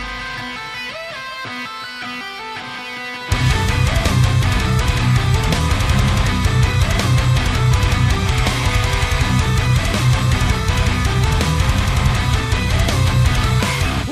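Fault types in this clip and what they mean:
Crude rate conversion: the audio was resampled by repeating samples with no filtering, which fits a nearest-sample step from 44.1 kHz to 48 kHz. The resulting patterned error, about 25 dB below the signal, adds a gritty, inharmonic fizz throughout that follows loud and bright passages.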